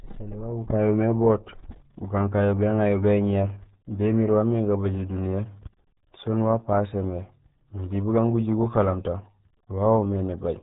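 From start to finish the speech carries RealAudio 14.4 codec damage: an 8 kbit/s dial-up speech coder that removes everything above 3.8 kHz, leaving muffled, gargly, heavily degraded sound.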